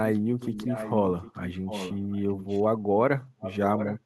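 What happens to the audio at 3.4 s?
From 3.39 to 3.58 s there is an echo leak: a faint copy of the speech, roughly 10 dB quieter, repeats about 0.75 s late. The likely cause is a far-end loudspeaker echo the canceller missed. On a spectrogram it appears as weaker, shifted duplicate harmonics.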